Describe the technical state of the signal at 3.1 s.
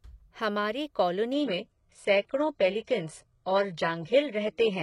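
At 3.1 s the signal is inside a stretch where the adaptive stream has dropped to a lower bitrate, running from 1.33 s to the end at 4.82 s. The connection's slowdown forced a far cheaper encoding; the quality changes suddenly, with a switch from roughly 96 kbit/s AAC to a 12 kbit/s HE-AAC stream. A spectrogram shows a hard ceiling with nothing above 11.1 kHz from 1.33 s onward, while the waveform continues without any gap.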